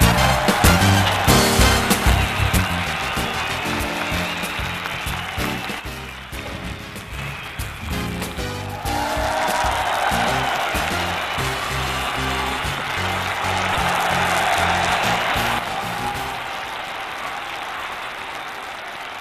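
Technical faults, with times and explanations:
Throughout, buffer tearing: there's a steady robotic buzz at 200 Hz riding on the sound whenever anything is playing. The writer and reader of the ring buffer have slipped, so a small slice of each period, a few percent, replays audio from about 10 ms earlier with hard joins either side. The 200 Hz rate fits a 5 ms buffer period.
5.80 to 7.18 s and 15.59 s to the end, sudden gain jump: both times the sound and the background noise drop together by about 6 dB in one step, then come back up at 7.18 s. The second drop lasts to the end. This is likely a digital gain change applied without a ramp.
13.72 to 13.77 s, compressed frames skipped: the audio jumps ahead by roughly 150 ms. Whole compressed frames weren't played, either because they were missing or because the decoder rejected them as damaged. The short disturbance at the join marks where the material on either side was stitched together.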